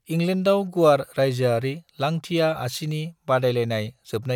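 No technical faults can be heard anywhere in the speech.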